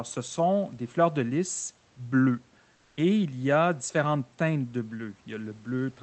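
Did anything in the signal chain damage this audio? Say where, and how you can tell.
Yes, codec stage: from 2.75 to 2.97 s the background becomes steady, featureless comfort noise at unchanged level, likely Opus discontinuous transmission filling the pause.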